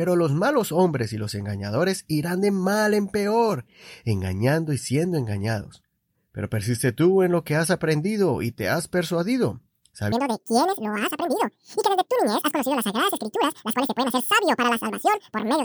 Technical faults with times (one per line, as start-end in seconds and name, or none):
10.12-15.64 section at the wrong speed